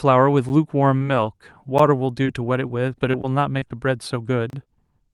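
At 0.49 s a block of digital silence drops about 10 ms of the speech to silence with no fade. It is heard as a sharp tick. On the waveform it appears as a flat line with abrupt edges, and the spectrogram shows a thin vertical broadband stripe at each edge, which suggests the output buffer was not filled in time.

From 0.97 to 1.04 s, short concealed packet loss removes about 20 ms of audio. The receiver fills the hole with roughly 30 ms extrapolated from the preceding sound, stretching the passage slightly, and this is heard as a brief smear. The spectrogram shows a smoothed patch where the real detail should be, then a blend back into the real signal.

At 1.78 s a second 10 ms block of silence gives another tick with the same flat gap and edge stripes.

Between 2.24 and 3.63 s there are scattered short gaps, about five of them, the longest around 20 ms. Each is patched by continuing the last sound, giving small hiccups. 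They show as brief smooth patches in the spectrogram.

From 4.50 to 4.53 s a longer 30 ms silent block is heard as a short hole.

At 4.63 s a second short concealed packet loss fills about 25 ms. It sounds like a quick wobble and shows a smeared spectral patch in the spectrogram.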